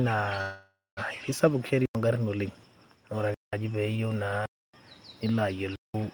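At 0.41 s a call audio freeze begins and lasts until 0.99 s. The last sound is carried on as a fading buzz or hiss, with about 0.21 s of flat silence inside the stall, and then the speech picks up exactly where it broke off. Nothing is lost, but roughly 0.56 s of delay is added. This is likely packets held up in transit, leaving the jitter buffer empty until they arrived.

Four blocks of digital silence follow: 1.86–1.95 s (93 ms, just before "ongarin oleng"), 3.34–3.53 s (186 ms), 4.46–4.74 s (279 ms) and 5.76–5.94 s (186 ms). Each one drops hard to silence and returns with no fade, leaving a clear hole in the speech. The lengths are whole multiples of about 93 ms, which fits a 4096-sample output buffer that was not filled in time once, twice or three times in a row.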